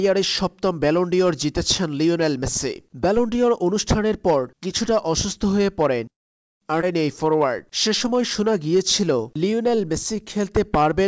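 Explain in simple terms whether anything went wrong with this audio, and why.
Three things went wrong, all tied to how the audio travelled over the call connection.

From 6.10 to 6.63 s there is a call audio freeze, likely caused by packets of audio being held up in transit so the receiver's buffer ran dry. The sound drops to silence for about half a second, then carries on from exactly where it stopped, with nothing lost.

At 6.81 to 6.84 s comes a skip ahead: roughly 0.4 s of audio was dropped. Playback jumps straight forward, so a short chunk of sound is simply missing and the two sides are stitched together.

From 7.88 s to 11.02 s there is a jitter buffer slow-down. To build up a reserve, the receiver stretched the audio by repeating tiny slices, adding 280 ms. The sound plays at about 91% speed with the pitch unchanged, so it seems slightly drawn out.

The call codec also leaves nothing above 8 kHz, which you can hear as a gently muffled top end.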